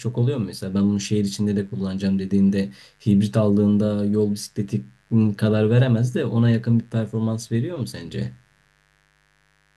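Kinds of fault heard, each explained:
Mains buzz: a steady, raspy buzz sits under the speech for the whole clip, built on the 50 Hz mains frequency. It isn't a smooth hum. Sharp switching spikes leak in twice per mains cycle, the sort of thing a dimmer, a rectifier or a missing shield lets through, so the harmonics stack up from 50 Hz into the kilohertz range. It sits well below the speech, about 40 dB down.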